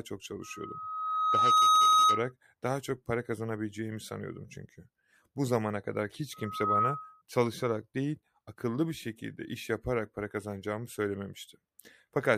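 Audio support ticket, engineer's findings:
Single steady tone at 1.3 kHz swelling into a squeal, settling about 10 dB above the speech. Loudspeaker feedback squeal.

0.42–2.32 s: builds over roughly a second, cuts just before "daha çok para kazanabileceğimi".

6.33–7.22 s: after "zamana kadar hiç", faster rise, under half a second, gone before "çalışarak değil akıllı bir".

Cause: mic picking up its own PA speaker, loop gain above unity at 1.3 kHz.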